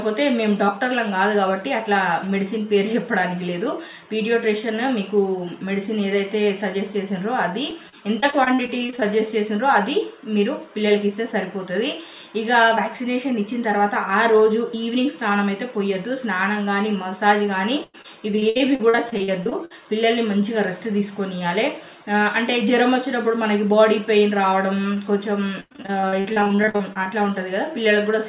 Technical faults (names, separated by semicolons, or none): repeated packet loss (robotic sound)